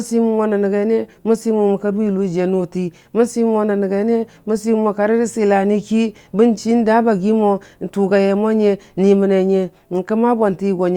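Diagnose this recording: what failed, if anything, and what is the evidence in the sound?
Nothing in this speech recording points to a failure at any stage of the chain, so there's no diagnosis to make here.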